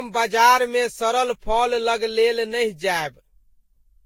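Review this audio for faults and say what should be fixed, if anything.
The whole speech clip has that swirly, hollow quality, with consonant attacks smeared and a watery shimmer that sounds worse than a single moderate-bitrate encode would. That's classic generation loss. It's likely from being decoded and re-encoded about seven times with a lossy codec around 54 kbit/s, Vorbis by the sound of it. Each pass requantises on a shifted frame grid, so the noise and spectral holes stack up. There's also nothing above 16.6 kHz. To prevent it, keep a lossless master and encode to the lossy format only once, at the end.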